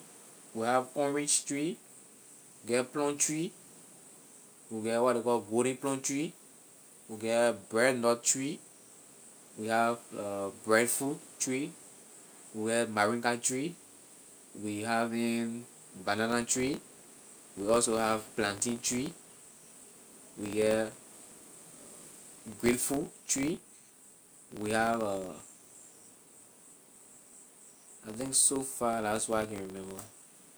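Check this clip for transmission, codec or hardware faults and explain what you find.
One fault is present: a filter restarted on every block. It starts at 16.3 s and runs to the end of the clip. From that point, each processing block begins from silence instead of carrying on the filter's stored state. That reset leaves a small transient at every block boundary. The ticks repeat at 43.1 Hz, which fits 1024-sample blocks. Together they form a low buzz under the speech, louder where the speech is louder.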